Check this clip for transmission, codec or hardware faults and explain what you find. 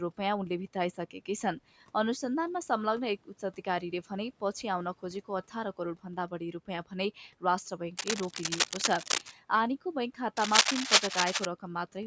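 Two bursts of cable scratch noise are audible. From 7.97 to 9.34 s, and again from 10.37 to 11.46 s, dense, uneven scratching and rustling sits over the speech, roughly as loud as the voice in the first burst and somewhat louder in the second. The likely cause is a worn cable, connector or control being moved, so its contact resistance jumps rapidly and injects irregular noise into the signal. The call-style microphone filtering (nothing above 8 kHz) and the room noise about 27 dB below the speech are normal, not faults.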